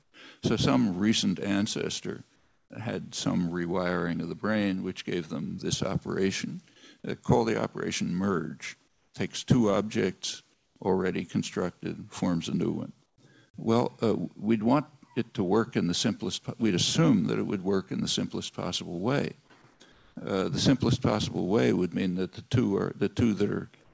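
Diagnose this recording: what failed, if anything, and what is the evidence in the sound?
The likely failure sits in call processing: discontinuous transmission in the sender stopped sending during pauses, and the receiver filled each gap with comfort noise in place of the background. The real background, some 35 to 45 dB below the loud passages, gives way to a smoother synthetic hiss at 0.02–0.14, 2.36–2.70, 8.88–9.14, 10.54–10.76, 13.06–13.18, 19.92–20.16 and 23.84–23.93 s. It is about 3 to 12 dB quieter in the first six stretches and matches the level, but not the texture, in the last.

The same stage likely produced an onset clipped by the voice detector at 2.68–2.70 s. The detector was slow to register that sound had resumed, so its first 20 ms were never sent, and comfort noise ran right up to it. The sound therefore begins abruptly, without its soft attack, directly out of the synthetic hiss. 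Across the whole clip, nothing is heard above 8 kHz, which fits a G.722 call path.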